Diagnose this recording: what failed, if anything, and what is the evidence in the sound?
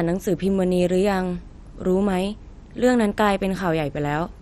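The speech sounds dull and granular from start to finish, with a gurgling, watery texture on the voice and upper detail that flickers in and out. Nothing is present above about 14.5 kHz. This points to the codec stage, likely MP2 compression at a heavily constrained rate, around 56 kbps. With that few bits spread across its 32 sub-bands, the encoder shuts off upper bands intermittently and quantises the remaining ones coarsely, producing the swirling distortion.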